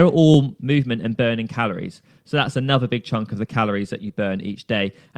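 At 0.34 s, just before "movement and burning calories", there is a repeated buffer. New audio did not reach the output in time, so the playback device sent the previous block out again. The repeated block is 5.8 ms long, which fits a 256-sample buffer, and it plays one extra time. Because the block is so short, the hard joins make a click or brief buzz rather than a stutter, and essentially no audio is lost.

From 4.08 to 4.10 s, right after "the calories that you", there is a short concealed packet loss. About 10 ms of the stream did not arrive at the decoder in time. The receiver filled that 10 ms gap by extending the preceding sound, then crossfaded back into the real signal. The result is a brief smear or wobble lasting a fraction of a syllable, where the concealment stands in for the missing audio.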